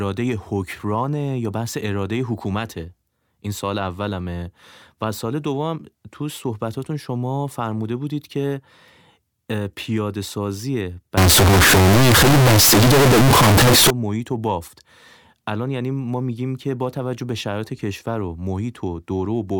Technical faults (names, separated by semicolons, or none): float read as integer